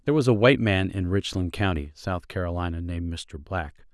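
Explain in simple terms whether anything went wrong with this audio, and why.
Nothing went wrong with this recording: the speech has no dropouts, distortion or glitches anywhere in it.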